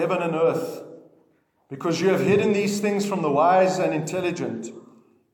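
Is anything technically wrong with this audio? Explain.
No, nothing technically wrong can be heard in this audio. No working path is listed to describe beyond that, so there is nothing further to report.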